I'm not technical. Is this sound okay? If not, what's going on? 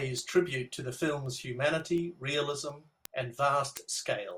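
No. From 0.18 s to 4.31 s there is a steady ticking, about every fifth of a second, roughly twenty ticks. These are word clock ticks: two digital devices run slightly different clocks, so one sample keeps slipping each time they drift apart.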